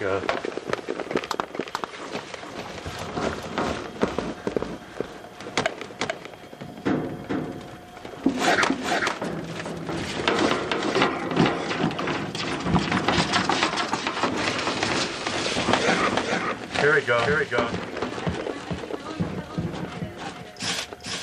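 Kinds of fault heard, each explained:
Doubled audio track: A second, slower capture path or an edit holding two out-of-step copies is the likely cause, mixing the same material in twice. Throughout the clip a full-band duplicate trails the original by around 400 ms, sitting roughly 5 dB lower. Because the copy carries no decay or room colouring, it reads as a crisp, detached repeat rather than reverberation, smearing every onset into a distinct second hit.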